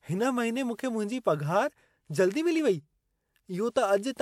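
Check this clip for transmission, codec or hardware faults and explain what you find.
One codec fault is audible. Pre-echo at 1.20 to 1.25 s, after "मूंखे मुंहिंजी": the codec spread block-wide quantisation noise ahead of an attack, leaving 49 ms of hiss that smears the onset.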